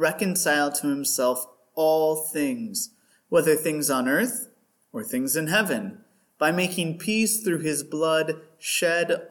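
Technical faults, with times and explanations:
No technical faults detected.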